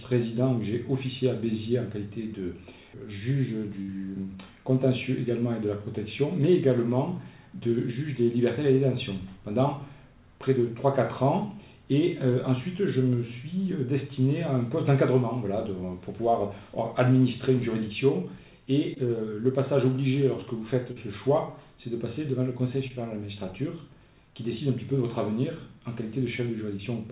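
At 3.82 to 3.90 s a burst of packet loss removes about 60 ms of audio. The receiver extends the last sound and fades it over roughly 61 ms, producing a short held, decaying tail before playback resumes slightly further on with that stretch missing.

Three instances of short concealed packet loss follow, at 18.94 to 18.98 s, 20.92 to 20.98 s and 22.88 to 22.92 s, each dropping 20 to 40 ms. Each gap is patched by continuing the preceding sound and blending back, heard as a brief smear or wobble. The band-limited sound, with nothing above 4 kHz, is consistent with a G.711 mu-law call path.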